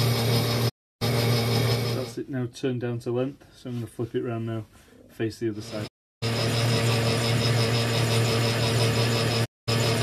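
At 0.68 s the sound fades out over 20 ms and goes silent until 1.03 s. This is a digital broadcast dropout. The receiver stopped getting valid frames and muted until good ones returned. About 312 ms of programme is lost, which fits roughly 13 frames of 24 ms each. The same happens from 5.86 to 6.24 s, losing 336 ms, and from 9.44 to 9.69 s, losing 216 ms. Each time, the sound resumes further along, with the gap missing.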